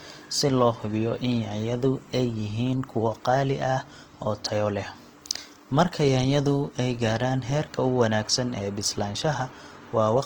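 From start to finish the speech carries a grainy, rough texture, with harmonics smeared into hiss-like noise, the plainly audible signature of what is likely Opus compression in its CELT music mode. At a rate that fits around 16 kbps, the encoder preserves each band's energy but fills starved bands with folded or noise-like content. On a spectrogram the harmonic lines look fuzzy and speckled rather than gapped, and energy still reaches about 20.1 kHz.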